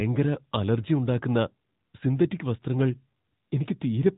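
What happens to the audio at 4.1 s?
At 4.1 s the speech is still under the AMR narrowband mobile codec that runs through the whole clip. Nothing above 3.8 kHz survives, and the pulse-driven vocal-tract model leaves a plainly buzzy, synthetic edge, consistent with a bitrate around 10 kbps. A simple low-pass filter would dull the sound without that artificial buzz.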